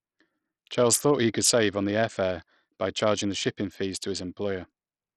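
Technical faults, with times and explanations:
Throughout, Bluetooth SBC compression: the speech carries a gritty, grainy noise and unsteady, flickering treble, likely from SBC coding at a heavily starved bit pool consistent with about 64 kbps; a spectrogram shows patchy, blocky upper bands up to 20.8 kHz.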